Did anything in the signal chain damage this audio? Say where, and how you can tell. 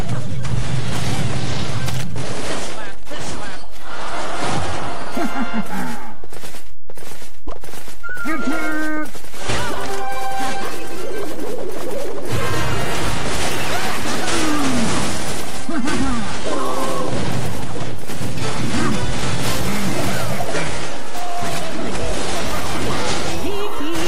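Yes. The whole clip carries a DC offset, most likely introduced at the converter or in the analogue wiring ahead of it. The waveform sits shifted off zero by a constant of about -12 dBFS from start to finish. You cannot hear it as a tone. It shows as fixed energy at 0 Hz. That shift eats headroom on one side, so peaks in that direction have less room before clipping.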